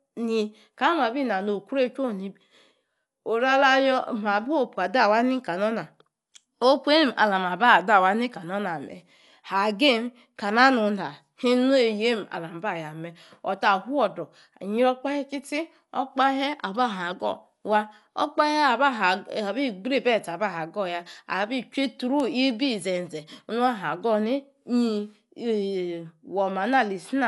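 Dull speech with rough, fluttering noise around tones throughout and nothing above 11.4 kHz, plainly audible damage that likely comes from Dolby Digital compression at a low bitrate, which fits 64 kbps.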